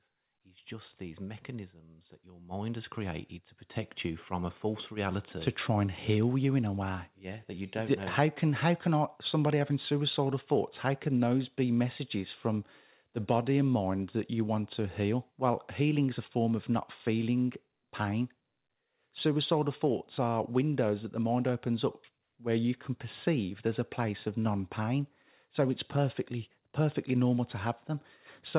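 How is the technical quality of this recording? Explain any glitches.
The recording has one clear fault, an automatic gain rise at the start, heard through a narrowband call path with nothing above 4 kHz, consistent with G.711 telephony coding. From 0.43 to 8.15 s, automatic gain rising: the gain control judged the input too quiet and ramped up about 17 dB, so the speech and background noise swell together.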